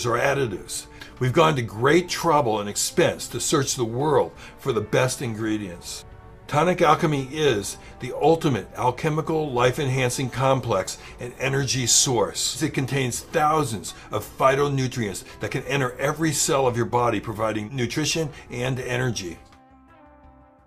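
No technical faults can be heard anywhere in this recording.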